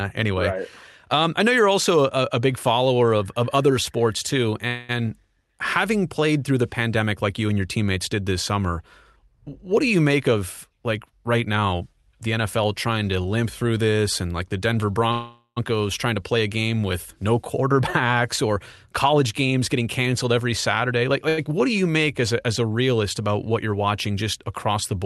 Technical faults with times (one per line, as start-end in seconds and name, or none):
4.67-4.91 call audio freeze
10.11-12.65 jitter buffer speed-up
15.12-15.58 call audio freeze
17.62-18.53 jitter buffer speed-up
19.06-21.11 jitter buffer speed-up
21.29-21.39 short stall from a late packet